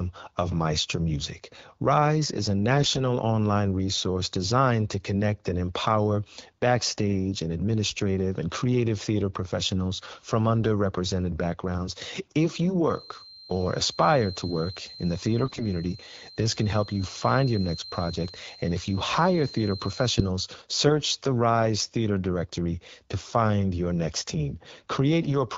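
Speech, carried over AMR-WB (HD Voice) with light coding softness, which fits the 12.65 kbit/s rate. It has two faults. AMR bit errors hit three short stretches: 2.71 to 3.01 s, 15.44 to 15.66 s and 25.22 to 25.36 s. In each, the voice keeps its pitch and loudness but turns hoarse, scratchy and gargly. A few percent of the weakly protected bits in each frame arrived flipped, so the excitation pulses and the finer gain and spectral values decode wrongly. Unlike packet loss, nothing drops out or gets muted or smoothly concealed. From 12.83 to 20.33 s, a thin feedback whistle at 4.1 kHz sits about 20 dB below the speech, swelling and fading slowly in level. It is likely caused by a loudspeaker-to-microphone loop held just short of instability. Unlike full acoustic howl, it never builds into a howl or runs away, and unlike electrical interference, its level drifts rather than staying fixed.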